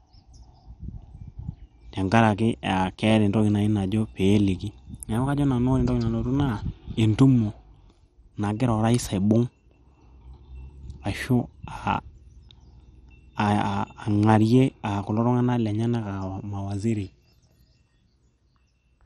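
Right through the speech there's heavy coding damage: nothing above 13.2 kHz, upper bands flickering in and out, and a gurgly, grainy texture. That's likely MP2 compression starved of bits, which fits a rate around 56 kbps, so whole sub-bands get dropped.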